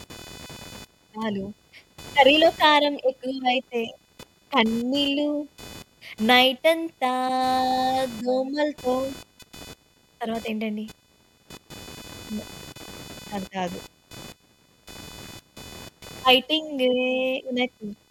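Computer activity noise runs through the whole clip as a buzzy, chirping layer pulsing at around 500 Hz, roughly 20 dB below the speech. Shifting processor or graphics load disturbs the ground shared with the audio circuit, injecting interference that follows the machine rather than the speech.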